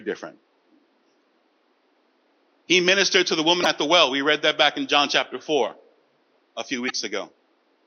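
Three brief glitches cut into the speech at 1.19 to 1.23 s, 3.62 to 3.66 s and 6.86 to 6.91 s, each lasting roughly 40 to 45 ms, heard above room noise that sits about 44 dB below the speech. This is damaged data in a compressed stream. Corrupted bytes make the decoder misread the affected frames, lose synchronisation and search for the next valid frame header before normal decoding resumes.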